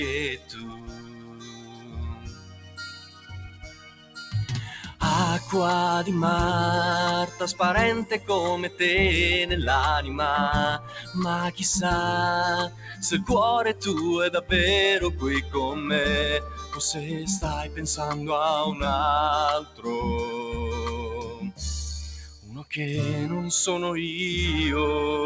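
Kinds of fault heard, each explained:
Noise suppressor applied to music or sounds: a speech-tuned suppressor mistakes held tones and tails for noise, so level pumps by around 15 dB, unlike the codec's fixed 8 kHz ceiling.
Sound cut by the noise suppressor: sustained passages sink by up to about 15 dB, longest from 0.3 to 5.01 s, while sharp attacks survive, unlike a full dropout.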